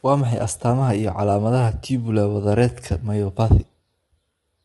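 Throughout the speech, the coding points to low-delay AAC compression at a low rate, likely AAC-ELD at around 32 kbps; its short frames resolve harmonics poorly, so the voice sounds plainly rough and grainy, with noise between harmonics and nothing above 11.6 kHz.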